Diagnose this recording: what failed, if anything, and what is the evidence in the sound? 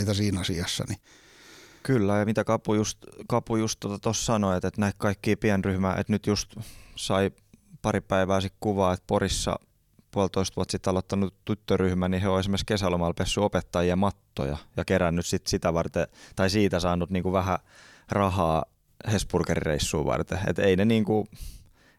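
Nothing failed here: I listened closely to this speech recording and couldn't find a single fault at any stage of the chain.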